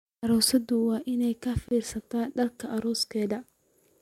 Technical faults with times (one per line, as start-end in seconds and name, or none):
1.68-1.71 gap at a join of encoded pieces